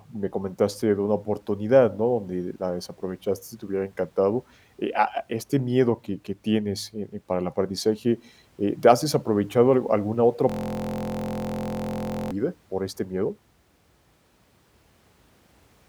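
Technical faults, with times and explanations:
10.50–12.31 s, system hang loop: Right after "desaprovechado al alguna otra", the system froze while playback kept cycling one 23 ms slice of its buffer, which fits a 1024-sample buffer. It repeats 78 times, a steady 43 Hz buzz, until "por este miedo".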